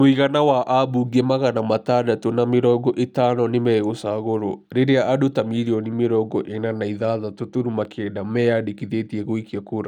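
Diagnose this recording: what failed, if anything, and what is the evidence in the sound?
Wrongly applied de-emphasis at the processing stage: from 5.75 s to the end of the speech, the treble falls away on a gentle slope, about 8 dB down at 10 kHz relative to 1 kHz, and the sound turns dull and muffled. A treble-cut filter meant to reverse pre-emphasis is acting on audio that never had any boost, or has been applied a second time. A low-pass filter or codec band limit would instead show a sharp cut-off, with the top simply missing.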